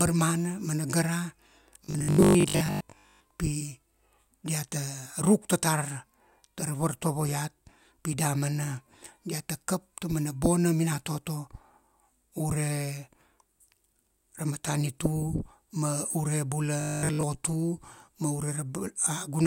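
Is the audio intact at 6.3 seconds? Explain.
Yes, at 6.3 seconds the audio plays through without any dropout, click, distortion or other fault.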